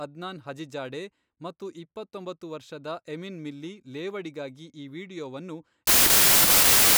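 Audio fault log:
5.87–6.97 s: wrong sample width. The last stretch becomes loud, harsh noise with the speech faintly buried inside, sped up 1.33 times and raised in pitch. This fits packed 24-bit samples read as 32-bit: bytes from neighbouring samples merge into mostly meaningless values.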